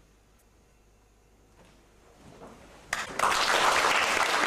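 Two brief blips at 0.35 s and 3.02 s, each about 70 ms, come from damaged data in a compressed stream: the decoder misreads corrupted frames and loses sync, leaving short broadband smears on a spectrogram and abrupt waveform discontinuities.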